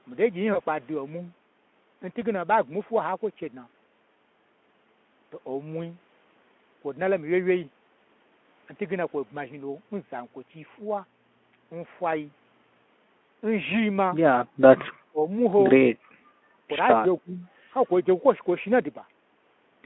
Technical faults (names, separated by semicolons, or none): VoIP packet loss concealed by the speech codec; speech suppressed in double talk